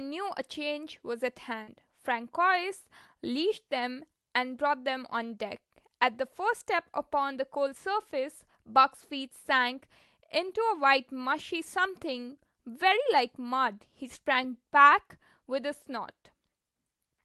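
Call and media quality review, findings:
Short concealed packet loss, 1.63–1.69 s: brief smear in the speech. About 40 ms of audio arrived too late for the decoder, and the receiver's concealment continued the preceding sound across the hole before crossfading back. On a spectrogram, the preceding spectrum continues across the gap with a blurred onset. The call-path band tops out near 12 kHz.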